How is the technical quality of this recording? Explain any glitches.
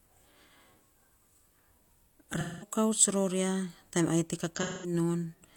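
The recording has two audible dropouts caused by AAC frame loss with concealment. The first runs from 2.39 to 2.71 s, just before "ror a taim ai". The second runs from 4.56 to 4.93 s, just after "a taim ai te". Each time about 213 ms of coded audio is missing, which fits five lost frames. The decoder fills the gap from the last good spectrum, so each patch sounds smeared, noisy or phasey.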